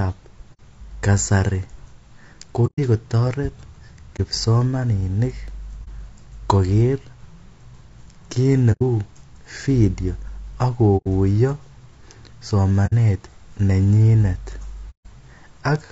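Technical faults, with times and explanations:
throughout, low-delay AAC compression: The speech sounds rough and grainy, with a hiss-like fill between the pitch harmonics and a top band that sounds thin and artificial. This damage is plainly audible. The likely cause is AAC-ELD, the low-delay coder used for video calls, at a rate that points to about 32 kbps. At this low rate the bits run out, so the gaps between the harmonics fill with coding noise.
0.53–0.60, 2.66–2.79, 4.16–4.20, 5.84–5.88, 8.72–8.82, 10.97–11.07 (just after "video ako"), 12.86–12.93 and 14.90–15.06 s, AAC frame loss with muting: The speech briefly drops to silence and returns, with soft edges. The gaps run from 30 ms up to 150 ms, in steps of 30 ms. Whole coded frames were missing, and the decoder replaced them with silence. The overlapping transform windows then fade the sound out and back in, which softens the edges of each hole.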